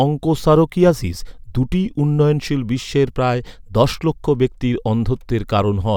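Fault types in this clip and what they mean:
Nothing stood out on listening to the speech.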